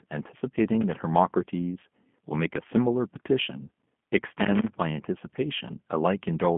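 G.729 coding runs from start to finish of the speech. The codec rebuilds each 10 ms frame from a vocal tract filter, a pitch predictor and a few pulse positions, and the result here fits G.729A at 8 kbit/s. Nothing above 3.5 kHz survives, and the telephone band of roughly 150 Hz to 3.4 kHz gives the sound its narrow, boxy quality. The coding damage is plainly audible as a rough, slightly synthetic buzz riding on the speech.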